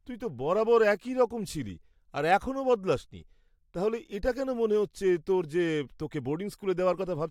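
A short recording of speech, with no technical fault to report. Nothing in it needs a time stamp or a cause.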